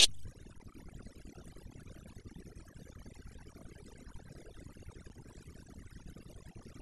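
Right from the start and all the way through, you can hear overdone noise removal. The noise reducer was pushed too hard, so any frequency band sitting close to its noise estimate gets pulled way down or switched off, and the quieter parts of the speech get dragged out with it. The background drops and breaks up into little twinkling specks.

Then there are two short dropouts from an underrun with held sample. The first runs from 0.58 to 0.60 s, about 20 ms, and a much shorter one hits at 5.09 s, lasting about 7 ms. Each time the output buffer ran dry, and the converter just held its last value, so the waveform sits flat and the sound briefly stops without a click at the start. Live audio kept going during each gap, roughly a couple of hundredths of a second the first time and a few thousandths the second. Playback resumes further along.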